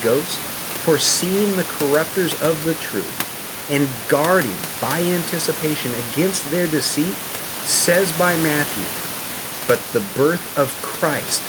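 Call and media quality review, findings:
No faults found in the speech. Room noise from the microphone's surroundings sits about 12 dB below the speech, part of the recording rather than the system.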